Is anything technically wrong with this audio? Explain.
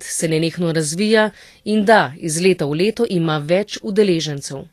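Yes. Throughout the speech there is plainly audible Vorbis compression damage, likely from low-bitrate encoding, consistent with about 37 kbps. Treble detail is coarsely quantised into grainy hiss, consonants smear, and a spectrogram shows a hard ceiling at 14.2 kHz with blotchy, speckled high-frequency energy.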